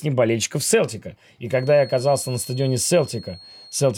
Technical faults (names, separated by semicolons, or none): feedback whistle